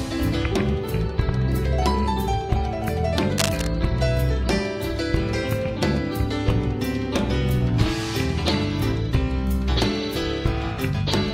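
A worn cable, connector or control was likely moved between 3.37 and 3.67 s, making its contact resistance jump rapidly for about 0.3 s. That flickering contact lets dense, irregular bursts of noise into the signal path, so the clip shows cable scratch noise: a brief scratching, rustling crackle laid over the sound, only a few decibels below it.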